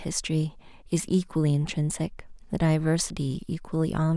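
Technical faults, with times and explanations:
Nothing in the speech stood out as a technical problem on listening.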